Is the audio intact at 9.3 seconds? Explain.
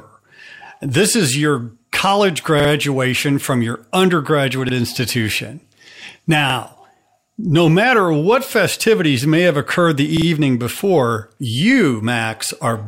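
Yes, the speech at 9.3 seconds is intact, with no dropout, click, distortion or other fault to be heard at that point.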